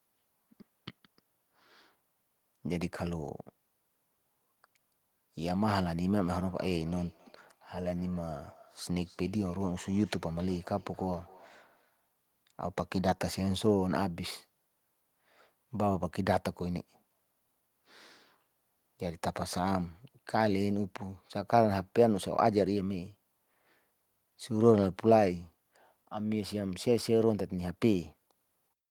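At 1.83 s and again at 12.80 s the speech jumps forward by a few milliseconds with no gap of silence. That seamless skip is what separates it from a dropout, which would leave a brief hole. The likely cause is a dropped buffer (overrun): the software was late reading a block of samples, the hardware wrote over them, and the audio on either side was joined end to end.

From 6.12 s to 12.10 s there is feedback echo between two devices. A second device in the same room plays the speech back out, and the first microphone picks it up again. Its echo canceller cannot remove sound it did not play itself. Each phrase returns after about 300 ms, thinner and more ringing with each pass, and peaks at about -27 dB below the speech. Room reverberation would be a smooth tail. These are distinct repeats spaced evenly in time.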